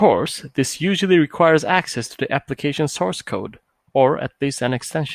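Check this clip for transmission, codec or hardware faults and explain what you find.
No fault turns up anywhere in this speech recording. There is nothing to time or trace, so no mechanism needs explaining.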